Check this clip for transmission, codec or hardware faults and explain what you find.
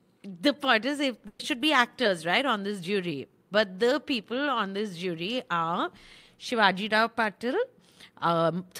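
One fault stands out: a burst of packet loss from 1.27 to 1.41 s. About 120 ms of the speech never arrived, so the receiver stretched the last sound and faded it into a brief held buzz or hiss before the speech picks up further on. Unlike a plain dropout, the gap is never silent.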